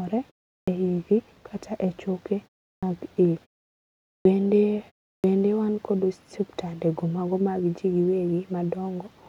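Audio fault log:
0.62 s, 2.76 s, 4.19 s and 5.18 s, clipped start after a pause: after each silence of 0.35 to 0.81 s, the output needs time to wake and lock again, so the first 55 to 66 ms of sound is swallowed and the word bursts in without its opening. Unlike muted pauses, where only the background drops out in gaps, actual speech onset goes missing.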